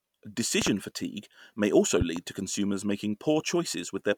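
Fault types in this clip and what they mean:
Loud pop: a voltage pulse, likely from a plug, switch or static, added to the speech. It is heard as a double thump at 0.62 s, before "fatigue may also", and at 2.01 s, roughly 10 to 15 dB above the speech, which continues underneath, unlike a dropout.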